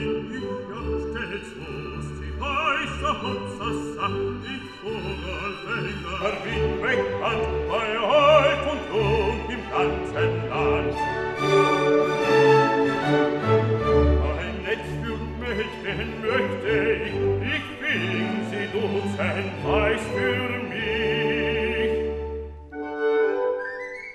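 Channel delay (comb filtering) runs from 0.00 to 6.21 s: one channel arrives a fraction of a millisecond late, and summing to mono cancels shared content at evenly spaced frequencies, the first notch falling near 700 Hz. The sound turns hollow and phasey.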